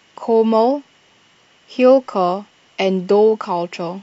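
No technical faults are audible.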